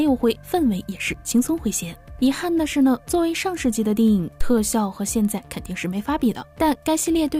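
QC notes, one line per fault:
4.41 to 4.54 s, phantom power thump: a deep low thump peaking at about -10 dBFS that dies away within roughly 30 ms. That's the supply switching on or off on a live input, with the voltage step pushed through the coupling capacitors as one low-frequency kick.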